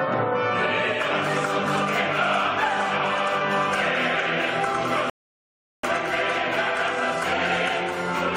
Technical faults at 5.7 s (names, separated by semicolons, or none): rebuffering stall